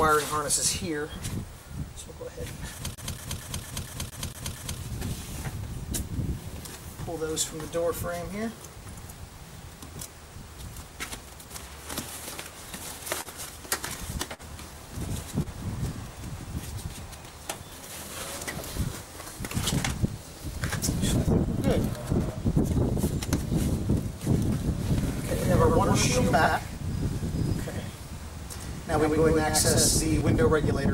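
From 2.95 to 4.79 s the clip is a CD stuck on one turn. A scratch sends the laser back one track at the same point on each rotation. So one 230 ms slice of audio plays eight times. A short mute marks each jump back. The result is a fast, even stutter. Nothing new is heard until the loop breaks at 4.79 s.

At 13.21 s there is a short stall from a late packet. A packet missed its slot, and the jitter buffer ran dry. The receiver stretched the last sound for 47 ms until the packet came. Then it carried on from the same point. No audio is lost. The sound is simply held too long, with a slight buzz or dip, and the delay grows by 47 ms.

From 14.34 to 14.42 s comes a burst of packet loss. Packets were lost or came too late to play. The receiver filled 52 ms by continuing the last sound and fading it down. A voiced sound turns into a held buzz here, and other sounds into a fading hiss. When playback resumes, 60 ms of audio is gone.

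At 15.42 s a second short stall from a late packet follows. This time the hold lasts 28 ms. Again nothing is missing. The last sound is stretched until the packet arrives, then the audio resumes where it stopped. The delay rises by another 28 ms.

From 21.97 to 22.37 s there is a jitter buffer speed-up. The buffer held more audio than its target, so the receiver trimmed it. It cut many short pieces, each one or a few pitch periods long. Roughly 40 ms is removed in total. The audio runs at 108% speed but keeps its pitch. At that rate it sounds hurried.

From 25.03 to 30.21 s there is a doubled audio track. A second full-band copy trails the original by about a tenth of a second. It sits about 5 dB lower. It has no decay and no room colour, so it is not an echo from the space. It starts and stops abruptly at those times. The likely cause is a second capture through a slower path, or an edit that holds two copies out of step.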